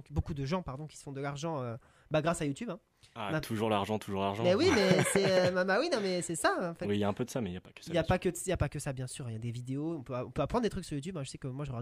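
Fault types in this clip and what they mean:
No faults are audible anywhere in this recording.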